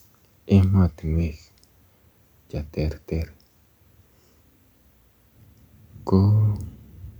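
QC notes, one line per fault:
No technical faults can be heard anywhere in the signal.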